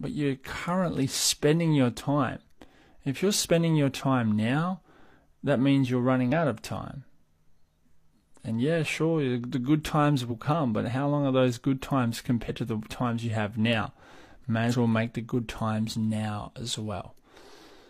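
A speech recording with damaged data in a compressed stream, heard five times. Brief chirps or blips land at 3.44 to 3.48 s, at 6.32 s between "that means you're" and "out of time", at 10.27 to 10.32 s, at 12.45 to 12.50 s after "are those good times", and at 14.68 to 14.75 s before "well make the good". Corrupted bytes make the decoder misread frames. It loses sync, then jumps ahead to the next frame header.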